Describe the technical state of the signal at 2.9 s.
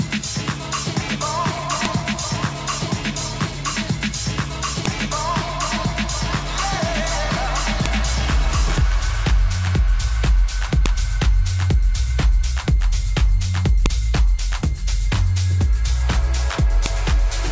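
The signal at 2.9 s is intact, with no dropout, clipping, distortion or other fault audible at that point.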